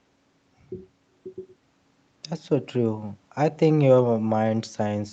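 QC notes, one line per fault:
No faults are heard in this speech. The sound carries nothing above 8 kHz, which fits a call path running a wideband codec.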